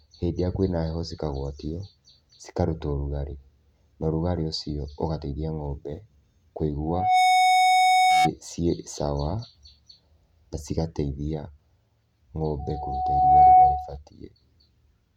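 A speech recording with two bursts of loudspeaker feedback squeal, from 6.86 to 8.31 s and from 12.59 to 13.97 s. Both times, a 740 Hz tone swells up over the voice, in about a third of a second the first time and more slowly, under a second, the second time. It peaks around 10 dB and then roughly 15 dB above the speech. The microphone is re-amplifying its own loudspeaker until that frequency runs away. A spectrogram shows a solid horizontal line at 740 Hz, and the waveform's envelope balloons into a dense, even block.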